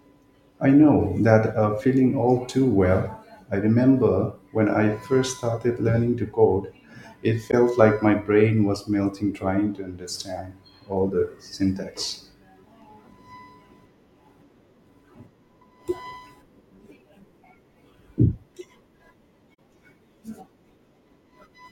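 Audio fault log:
7.51–7.54 s and 19.54–19.59 s, corrupt frame concealed: damaged AAC frames were detected by the decoder and patched over between "learning to code it" and "like my brain was", then again later, each spanning a few frames.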